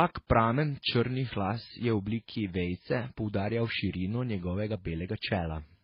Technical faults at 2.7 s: transcoding between lossy codecs

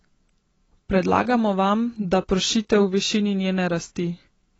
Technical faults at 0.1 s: AAC compression

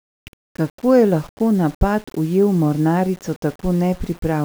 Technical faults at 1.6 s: low bit depth without dither

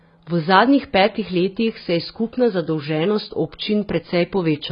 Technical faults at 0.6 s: AAC compression

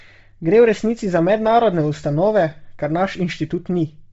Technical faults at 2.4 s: Bluetooth LC3 compression

